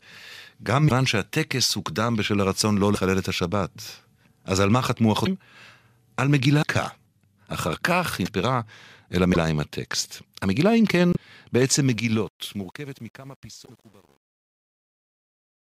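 A speech clip with brief chirps, noise bursts and small holes where the sound skips ahead, at 0.88, 2.94, 5.25, 6.61, 8.25, 9.33, 11.13 and 13.65 s, each lasting roughly 25 to 50 ms. The likely cause is a broken MP3 bit reservoir: frames of about 24 ms went missing, and the following frames reached back for borrowed data that was no longer there. From 11.67 s the level fades out, and to the end the fade turns gritty, worst from 12.43 s. This is truncation distortion on a fade, where an undithered gain stage at roughly 9-bit resolution reduces the quiet tail to coarse steps.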